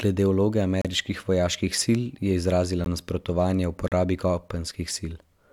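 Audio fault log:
0.82–0.85 s, 2.84 s and 3.88–3.92 s: gap between stream segments. The speech cuts to dead silence with hard edges for 33, 16 and 35 ms. The timestamps of the one-second segments don't quite meet, so the player pads the hole with silence. No audio is actually lost.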